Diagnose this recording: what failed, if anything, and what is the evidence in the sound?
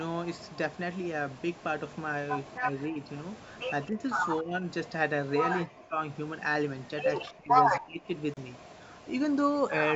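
Speech suppressed in double talk occurs at the call processing stage. Speech dips at 2.59–2.67, 2.87–3.00, 3.89–4.03, 4.41–4.65, 5.66–5.99, 7.28–7.53 and 7.79–8.13 s. Early dips are modest, about 10 to 20 dB. Later ones fall close to silence. An echo canceller likely took the talker for echo and turned everything down.

A Bluetooth dropout follows, at the playback stage. The sound cuts out from 8.34 to 8.38 s. It resumes as though it had kept playing. The hole fits two lost audio frames. Packets likely reached the headphones too late and were dropped.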